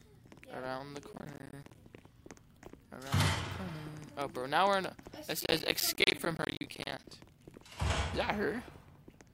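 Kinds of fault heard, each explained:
Processor overload crackle: The processor repeatedly failed to deliver audio buffers on time, and each miss dropped in a short silent gap with hard edges. Around 10 ms gaps cluster densely into gritty crackle from 1.13 to 1.75 s and again, longer, from 5.40 to 7.07 s.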